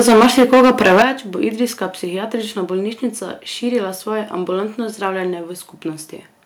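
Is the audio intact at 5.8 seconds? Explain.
Yes, the speech at 5.8 seconds is intact, with no audible fault at that moment.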